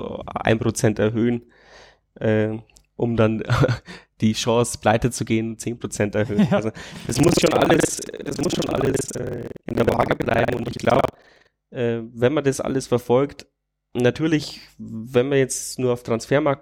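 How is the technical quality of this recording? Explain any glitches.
One glitch mars the speech: from 6.92 to 11.51 s, buffer tearing causes a robotic 21.5 Hz buzz, fitting a 2048-sample buffer, as writer and hardware cross. About 40% of each buffer replays audio about a tenth of a second old. Unlike dropouts, it leaves no gaps.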